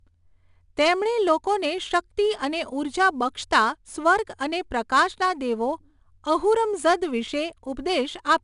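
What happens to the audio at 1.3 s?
At 1.3 s the speech carries the 4-bit ADPCM compression that runs through the whole clip. Each sample is coded as a coarse step from a prediction, leaving a gritty hiss that rises and falls with the speech and roughens sharp onsets. Nothing sounds above 10.6 kHz, and the damage points to a stream of about 89 kbps. Unlike a low-bitrate MP3, it has no swirly, warbling artefacts.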